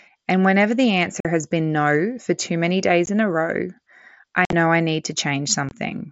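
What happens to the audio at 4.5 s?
At about 4.45 s the Bluetooth headset link drops voice packets on their way to the phone, and nothing fills the gaps: unconcealed Bluetooth headset packet loss. Across roughly 75 ms, to 4.53 s, about 60 ms of speech is missing, mostly in one run of about 52 ms, which fits a handful of consecutive 7.5 ms mSBC frames going astray. The speech stops dead and restarts with hard edges, giving a brief chopped hole.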